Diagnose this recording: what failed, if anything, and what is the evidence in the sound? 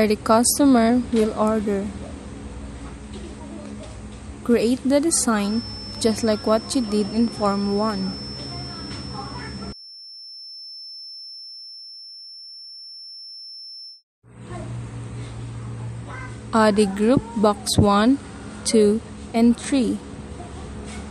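A feedback whistle runs from 5.37 s to 14.04 s: a thin, steady tone near 5.3 kHz sitting about 15 dB beneath the main sound and swelling and fading slowly in level. This is likely an analogue-stage acoustic loop, with a loudspeaker's output reaching the microphone at a gain just short of runaway. At that 5.3 kHz frequency the loop sustains itself without building up, so the tone hangs on rather than howling louder.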